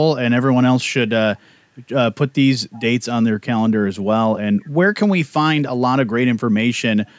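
An echo leak, likely from a far end playing the call over a loudspeaker whose echo canceller let part of the returning signal slip back into its microphone, shows up twice. At 2.74 to 2.83 s and again at 4.61 to 4.69 s, a brief, faint copy of the speech trails the original by about 0.35 s. It sits far beneath the direct speech, roughly 30 dB down the first time and a little weaker the second, so it registers as a ghostly scrap rather than a clear repeat. The band-limited call microphone path stops at 8 kHz.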